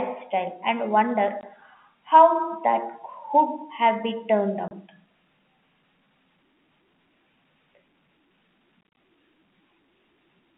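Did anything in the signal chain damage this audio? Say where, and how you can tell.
Yes. Packet loss filled with silence, a network-stage fault, cuts holes in the speech at 1.41 to 1.43 s, 4.68 to 4.71 s, and in a scattered cluster from 8.81 to 8.97 s, where about 100 ms is missing across 160 ms and no single gap exceeds 30 ms. The receiver played silence where audio never arrived, so each hole starts and stops abruptly. Gap lengths in 10 ms steps fit 10 ms packets. The telephone band above it, 200 Hz to 3.4 kHz, is intact.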